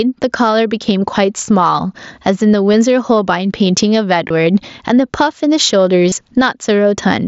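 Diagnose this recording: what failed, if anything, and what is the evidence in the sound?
The level drops by around 15 dB under each loud syllable, so the sound is squashed and breathing. This is gain pumping at the call-processing stage, most likely from input gain set far too high with a fast limiter clamping every peak.

A brief glitch at 2.73 s, then buzzy held tones from 4.28 to 4.30 s and 6.09 to 6.12 s, each ending in a slight warble. This is concealed Bluetooth headset packet loss on the wireless link, where the receiver fills each gap by repeating recent waveform. The 7.5 ms gap fits one lost mSBC frame, and the 22.5 ms gaps fit three.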